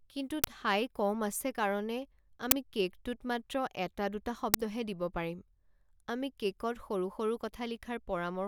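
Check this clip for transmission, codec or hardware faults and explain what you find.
There's one fault here, an uninitialised buffer, and it hits three times: at 0.44 s just before "ঠাই কম আছে", at 2.51 s just before "কে'কটোত মাত্ৰ এটা দুটা", and at 4.54 s just before "দিব পাৰিম". A block got played before any audio was written into it, so leftover memory came out as a loud crack. The bursts run about 5 to 11 ms, which fits 256- and 512-sample buffers.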